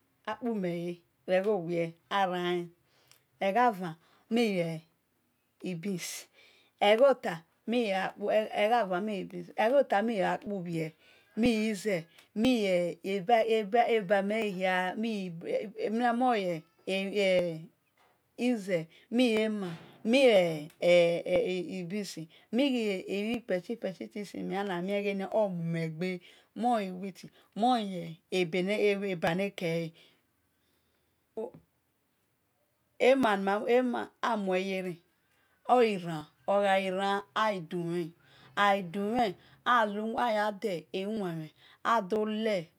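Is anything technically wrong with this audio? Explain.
Yes. From 10.47 s to 42.16 s the speech has periodic USB or driver dropouts, repeating every 0.99 s, about thirty in all. Something blocks the USB bus or audio driver at a fixed interval, and roughly 10 ms of audio is skipped each time rather than filled, so the waveform jumps across the gap. The result is a regular tick or small pop, audible only where the speech carries signal.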